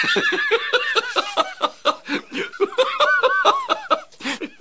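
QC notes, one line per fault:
No faults found: the signal has come through a WebRTC call path working as expected, with nothing above 8 kHz, which fits the G.722 wideband codec at 64 kbps.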